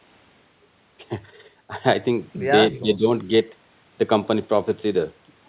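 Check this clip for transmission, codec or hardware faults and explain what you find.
One fault stands out, against a narrowband telephone band that stops near 4 kHz. From 2.79 to 3.05 s, the voice dips by roughly 10 dB, likely speech suppressed in double talk: an echo canceller mistook it for echo.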